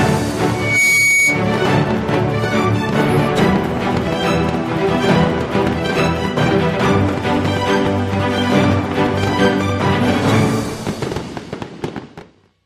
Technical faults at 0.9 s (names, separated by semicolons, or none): loudspeaker feedback squeal